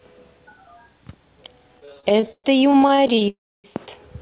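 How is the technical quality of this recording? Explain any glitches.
The recording has two clear network glitches from 1.8 s onward, both on a call path whose sound stops at 4 kHz, which fits a G.711 codec at 64 kbps.

From 1.8 to 3.28 s there are repeated stalls (stutter). Packets kept arriving late, so the receiver's jitter buffer ran dry 23 times, and each time it stretched the last bit of sound to cover the wait. About 0.45 s was filled this way, roughly a third of that stretch, with the longest gap 120 ms. Nothing is lost, but the speech drags and stutters.

From 3.30 to 3.66 s comes a call audio freeze. The likely cause is packets held up in transit, adding about 340 ms of delay, so the buffer emptied completely. The receiver briefly carried the last sound on and then faded it out, leaving about 290 ms of near silence. When the packets arrived, the speech resumed where it had stopped, so a pause was inserted rather than anything removed.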